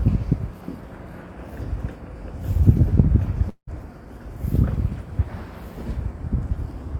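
A clip of everyday sound with a gap from 3.49 to 3.70 s, most likely a long network dropout. About 180 ms of audio never arrives. The receiver smears the last sound forward as a fading buzz for roughly 178 ms, leaving about 90 ms of near-silence before the sound resumes further on. On a spectrogram this shows as frozen, blurred bands thinning into a dark vertical strip. The waveform shows a tapering envelope, a flat stretch, then an abrupt restart.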